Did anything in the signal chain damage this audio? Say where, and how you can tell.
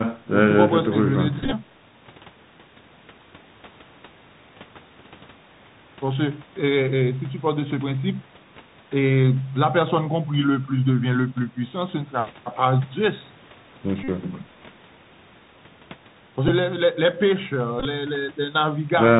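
Yes. The Bluetooth CVSD headset codec damages the whole clip at the codec stage. This one-bit delta modulation at 64 kHz cuts everything above 4 kHz. Its adaptive step lags behind loud bright sounds, so sibilants turn scratchy over a granular hiss.

Bluetooth headset packet repeated occurs at 1.43–1.54 s, 14.04–14.08 s, 16.48 s and 17.80–17.86 s, on the radio link. The decoder replays the previous 3.75 ms packet, producing a buzz near 267 Hz. The first and last events are broken bursts, the 16.48 s event only two packets.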